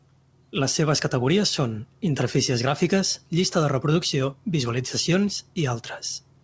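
No technical faults can be heard in this speech clip. It carries the sound of a WebRTC call path working normally, with nothing above 8 kHz, which fits a wideband call codec such as G.722.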